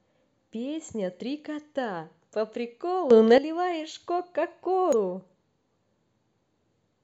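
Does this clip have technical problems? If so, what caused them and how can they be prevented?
Yes. A sudden gain jump runs from 3.11 to 3.38 s. The speech and the background noise rise together by about 11 dB in a single step, hold at that level, then drop back just as abruptly. The likely cause is a digital gain setting or bit shift applied from one sample to the next with no ramp. Gain changes should always be smoothed over a few milliseconds.

Damaged data in the compressed stream causes a brief blip at 4.93 s. At that point part of the encoded data was corrupted, so the decoder could not read the frame correctly, lost sync and skipped ahead to the next valid frame header. Checksummed transport and error-checked storage would keep corrupted frames from reaching the decoder.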